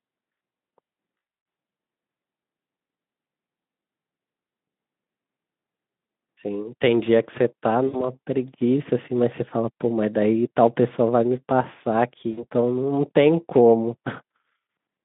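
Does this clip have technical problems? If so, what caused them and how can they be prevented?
Yes. VoIP packet loss concealed by the speech codec occurs at 1.17 to 1.45 s (gaps up to 120 ms), 7.87 to 8.09 s and 12.31 to 12.46 s. The decoder extrapolates its last pitch and filter with falling gain, so speech turns into a buzzy tone or coloured noise that fades. A spectrogram shows flat, smeared harmonics, and the waveform shows a decaying envelope. Forward error correction, an adaptive jitter buffer and a less congested network path would prevent it.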